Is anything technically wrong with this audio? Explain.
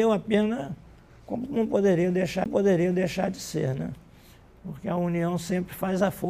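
Yes, there's a CD skip at about 2.44 s. The laser jumped to another turn of the disc's spiral, so playback mutes for a very brief moment, roughly 15 ms, giving a small tick, then carries on from a different spot in the audio.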